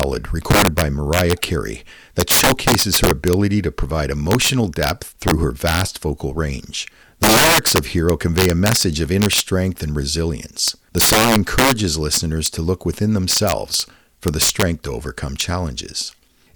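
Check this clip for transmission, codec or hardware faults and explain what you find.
Integer overflow runs through the whole speech recording. The signal has been driven roughly 12 dB beyond the integer limit, and instead of being held at full scale, every sample that crosses it wraps around to the opposite extreme. Only a small fraction of samples, around one or two percent, go over, so the damage lands on the loudest peaks as violent, snapping cracks. Ordinary clipping would flatten those peaks into a buzzy grit. These full-range sign flips are far sharper and more explosive.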